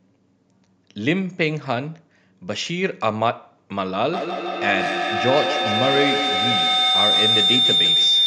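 At 4.13 s a feedback howl starts and runs to the end of the clip. A microphone is picking up a loudspeaker carrying the same call, and the loop has more than unity gain, so each pass comes back louder rather than decaying. The energy collapses onto a narrow tone around 4 kHz that pulses roughly every 150 ms, matching the loop delay, and peaks at about 2 dB above the speech.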